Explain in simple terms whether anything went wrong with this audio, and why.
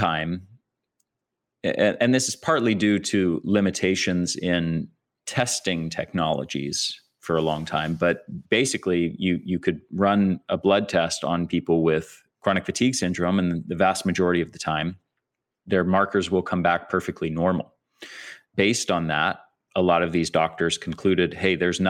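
Nothing went wrong here; the recording runs smoothly the whole way, with no glitches, gaps or odd sounds anywhere along the way.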